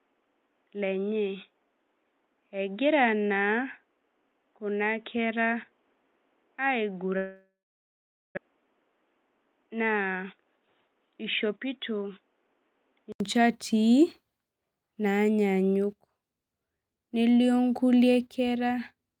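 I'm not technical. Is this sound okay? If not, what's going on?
No, it isn't. There are three separate problems.

From the start until about 13.20 s, the speech is dull and boxy. Nothing above about 3.8 kHz gets through, the speech is a little quieter, and there is a faint new background hiss. This is most likely an input switched to a poorer device, such as a headset in call mode. At 13.20 s the recording moves to a better input. A short gap of about 80 ms marks that switch, and the sound clears up right after it.

From 7.17 s to 8.39 s there is a long network dropout. Most likely the connection stalled and no audio came through. The receiver stretched the last sound into a fading buzz to cover the gap. That faded to silence for about 0.83 s. About one second of speech is simply missing. When the sound returns, it picks up later, not where it stopped.

From 10.22 s to 12.02 s there is a jitter buffer speed-up. 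After the dropout, audio piled up in the receiver's waiting area. To catch up, it cut out many tiny slices of sound, about 0.2 s in total. The speech runs roughly 10 percent fast there. The pitch stays the same, but the talking sounds rushed. The call's normal coding can be heard as a slight softness in the very highest sounds.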